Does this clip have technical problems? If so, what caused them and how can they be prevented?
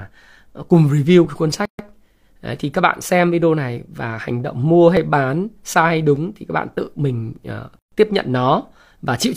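Yes. Clock drift buffer slips produce regular clicks about every 1.2 s from 1.25 to 8.69 s, about seven in all. Two independently clocked devices likely drift apart by several hundred ppm, so the buffer drops or repeats a few dozen samples each time. Locking both devices to one clock, or resampling adaptively between them, prevents this.

A gap at a join of encoded pieces appears twice, at 1.65–1.79 s (136 ms) and 7.79–7.92 s (130 ms), six seconds apart. Separately encoded segments keep their encoder start delay and final-frame padding, so silence interrupts the speech before it resumes. Encoding continuously, or trimming the encoder delay and padding when joining, prevents these gaps.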